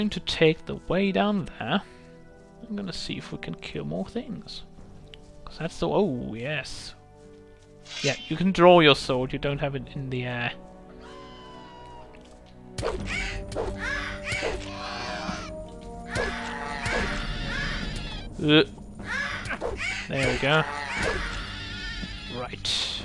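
No technical faults can be heard anywhere in this clip.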